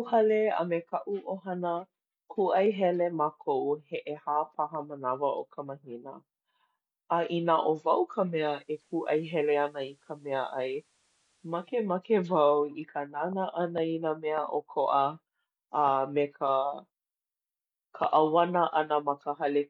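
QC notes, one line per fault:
8.33–11.94 s, digital radio blending to analogue: just after "wau ka" the receiver loses the digital stream and cross-fades over about half a second to the station's FM feed and back, so FM hiss comes up roughly 40 dB down and the level dips about 1 dB.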